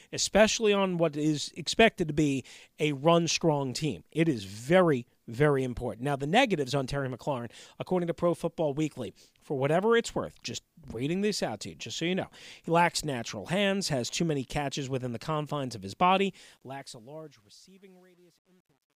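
From 16.16 s the speech fades out over about three seconds, but the fade picks up truncation distortion. The gain stage drops low bits without dither, which fits roughly 10-bit resolution, so from 17.02 s to the end it turns gritty and stepped.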